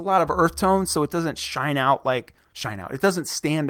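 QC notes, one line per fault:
1.84–3.69 s, call bitrate drop: from 1.84 s the speech loses its top end and turns coarse and watery. The encoder has been told to spend far fewer bits, which fits a fall from about 40 to 18 kbps, so it codes more roughly and trims the high band. The worst stretch lasts about 1.04 s. Unlike packet loss, nothing drops out or repeats, and unlike a fixed low-pass filter, the dulling comes with a grainy texture.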